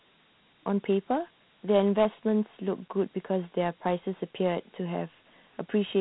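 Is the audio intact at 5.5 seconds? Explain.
No. At 5.5 seconds, as throughout the clip, the speech carries Dialogic VOX ADPCM damage. Each sample is coded as a 4-bit step whose size adapts to the signal, which fits a 32 kbps stream at 8,000 samples a second. Nothing is heard above 3.9 kHz, and a plainly audible gritty hiss rides on the speech itself. A plain low-pass filter would only dull the top without adding grit, and steady noise would not follow the speech.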